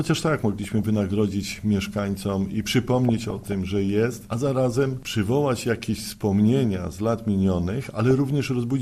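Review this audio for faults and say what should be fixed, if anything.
MP2 compression, throughout: the audio is dull and carries a gurgling, granular texture, likely from MPEG Layer II coding at a low rate, which fits about 80 kbps. The coder divides the spectrum into 32 sub-bands and shares a small bit budget among them. Too few bits switch the upper bands off, so they flicker in and out, and the remaining bands are quantised coarsely enough to be plainly audible. Prevent it by encoding or broadcasting at a higher bitrate, or by sourcing the audio from a less compressed original.

DAB burbling, at 0.64 to 0.83 s, 3.09 to 3.55 s and briefly at 8.11 s: short bursts of sub-band noise blips sit over the sound. Weak reception lets bit errors slip through the error correction into the MP2 frames, at a low rate of a few tenths of a percent. Corrupted samples put short noise blips in single sub-bands, and corrupted scale factors make sub-bands leap in level for up to a frame, and the longer middle burst spans the most damaged frames. 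Prevent it by improving the receiving antenna or signal strength, or by capturing from a cleaner feed.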